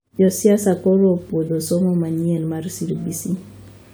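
Low bit depth without dither runs from 0.73 to 2.23 s of the speech. The grain sounds like a coarse quantisation error sitting around 50 dB below the signal, which fits about 10-bit resolution. The likely cause is rounding to that few bits with no dither added, so the error tracks the waveform instead of staying as steady hiss. Quiet stretches turn gritty and buzzy, and the roughness shifts as the level and shape of the sound change.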